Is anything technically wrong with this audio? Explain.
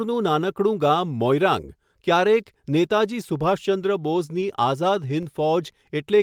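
Yes, two technical faults can be heard in this speech clip.

Lost packet rebuilt from error correction, 4.41 to 4.43 s, just after "મોઇરાંગ ક્યારેક નેતાજી સુભાષચંદ્ર": about 20 ms of audio, which fits a single lost packet, was replaced by the low-bitrate backup copy that Opus carries inside the following packet. Because the decoder played that reduced copy instead of going silent, there is no dropout. That short stretch comes through coarser and noisier than the audio around it.

DC step, 5.23 s: the waveform's zero line suddenly shifts to a new offset, the sort of jump produced when a converter recalibrates or an offset input is switched in. That sudden shift produces a low thump or click, while the speech carries on unchanged. The offset does not persist. It fades away as a high-pass filter with a cut-off of about 5 Hz gradually pulls the signal back to zero.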